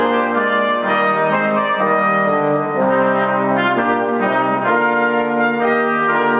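Gain pumping runs through the whole clip. The swing is around 10 dB. The likely cause is input gain set far too high, with a fast limiter or compressor clamping down on every peak. Loud and soft parts sit close in level, so the sound feels squashed. The call path also trims everything above 4 kHz, which fits G.711 mu-law at 64 kbps.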